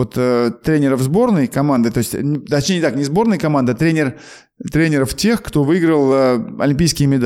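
From 4.75 s to 6.12 s the speech drops in pitch by about 94 cents, nearly a semitone, and slows by 5.27%, then snaps back to normal. This is likely a drift correction step, where clock-matching software briefly lowered the playback rate in one jump to rebalance its buffer. Unlike wow or flutter, the rate does not wobble. It holds flat for 1.37 s and returns abruptly. Because speed and pitch move together, it is not a pitch-only shift.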